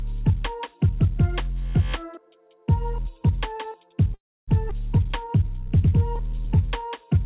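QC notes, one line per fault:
4.14–4.50 s, call audio freeze: The sound stops for about a third of a second, 335 ms in all. A short buzzy continuation of the last sound fades out, followed by about 280 ms of silence. The likely cause is packets held up in transit, which emptied the jitter buffer. The receiver filled the gap instead of dropping anything. When the audio resumes, it picks up where it left off, and nothing is lost.
4.70–4.73 s, skip ahead: Playback jumps forward, with a join only about 11 ms long. Roughly 150 ms of audio is missing, so the material on either side is butted together almost directly. This follows the freeze. Once delayed audio was queued, a stretch was discarded to catch back up, and the extra delay from the freeze dropped by about the same amount. The result sounds like an abrupt splice rather than a pause.
4.99–6.90 s, jitter buffer slow-down: For nearly two seconds the audio runs at about 93% speed, while the pitch stays the same. 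The receiver repeated single pitch periods and small slices of quiet parts to build a reserve, adding 129 ms in total. Sustained sounds become drawn out. The audio band stops at 4 kHz, which fits a G.711 call path, so the stretching is heard within a telephone-like bandwidth.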